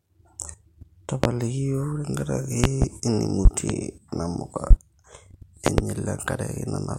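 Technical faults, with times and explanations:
1.24–1.27, 2.64–2.86, 3.45–3.73, 4.71–4.74 and 5.66–5.82 s, loud pop: Sharp pops, about 25 dB above the speech, sit on top of it. The three longer spans hold double pops. A likely cause is an electrical pulse from a switch, plug, static or driver glitch.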